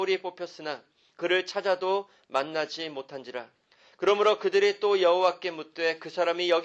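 No technical faults detected.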